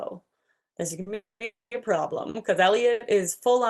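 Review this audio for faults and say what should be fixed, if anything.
A short stall from a late packet shows up three times: 1.01 to 1.08 s, 2.29 to 2.36 s and 2.92 to 3.02 s. In each case a packet arrived late, the jitter buffer ran dry, and the receiver stretched the last bit of speech to cover the gap (about 50, 50 and 80 ms). You hear a sound held a touch too long with a faint buzz or dip, but nothing is actually lost, and the speech picks up right where it left off.

The bigger problem is two call audio freezes, back to back at 1.14 to 1.42 s and 1.44 to 1.73 s. Each one starts as a buzzy or hissy continuation of the last sound that fades away, then goes silent for most of its length, about 180 and 190 ms. The whole hold lasts roughly 260 to 270 ms before the speech resumes from the same point. The likely cause is packets held up in transit long enough to empty the jitter buffer, so the audio gets a gap inserted rather than anything cut out. 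All of this rides on an Opus call path whose top end stops around 12 kHz.

To prevent both, give the jitter buffer more headroom or let it adapt to the network's delay spikes, and track down whatever is bunching up the packets on the route.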